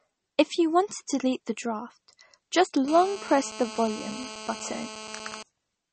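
This is a speech clip. The sound is watery and swirly, and nothing is heard above 8.4 kHz. This is likely MP3 compression at a low bitrate. From 2.88 to 5.43 s a hard, raspy GSM phone buzz sits about 14 dB below the speech. It repeats 217 times a second and holds nearly steady, as a nearby phone on a call does.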